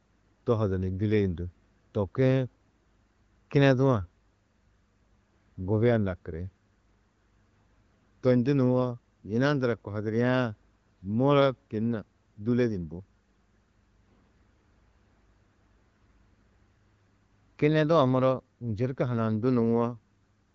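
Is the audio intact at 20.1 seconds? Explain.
Yes, at 20.1 seconds the speech comes through intact, with no fault at that moment, just the steady wideband sound of an AMR-WB HD Voice link running at 15.85 kbit/s.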